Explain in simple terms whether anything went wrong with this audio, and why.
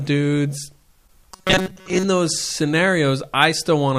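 From 1.31 to 2.06 seconds the speech turns into a stiff, metallic buzz at 188 Hz. This is robotic sound from repeated short buffers. New audio likely arrived too slowly. The software kept replaying a tiny slice, about 5 ms long, and most of the real sound was skipped.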